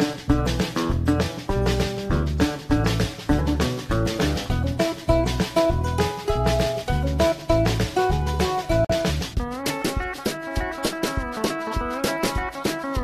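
At about 8.85 s there's a gap at a join of encoded pieces: the sound drops out for roughly 49 ms, up to 8.90 s, then picks up where it left off. Two separately encoded chunks were butted together with their encoder delay and padding left in.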